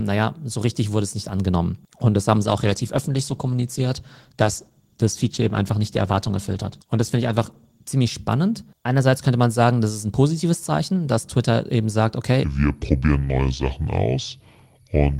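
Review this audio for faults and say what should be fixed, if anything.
From 2.41 to 7.95 s there's a call bitrate drop: the encoder gets squeezed from 32 to 14 kbps, so the speech goes coarse and muffled until it recovers. Giving the bandwidth estimator more headroom or setting a sensible bitrate floor would keep that from happening.

From 12.44 s to the end, the section plays at the wrong speed, about 0.65x, so the speech drops roughly seven semitones and drags. The likely cause is playback or editing against the wrong clock. Locking every stage to the same sample rate and clock would prevent it.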